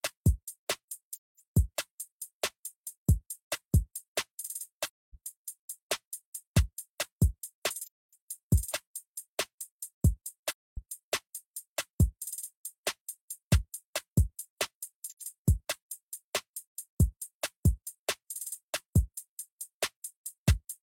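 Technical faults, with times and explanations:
1.15–1.39 s, 4.86–5.15 s, 7.84–8.13 s, 10.48–10.78 s, 15.10–15.21 s: AAC frame loss with muting. Sound fades smoothly to silence and back, as zeroed frames blend through overlapping windows. Spectrograms show full-band blank gaps with soft edges; waveforms show tapered envelope dips.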